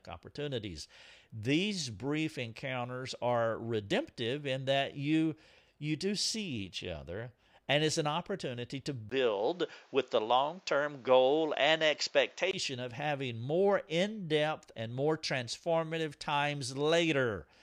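From 9.10 s to 12.53 s, after a 20 ms silence, the speech turns dull, with nothing above 7.6 kHz, a small level shift and a faint new noise floor that a filter alone would not add, likely an input switched to a poorer device.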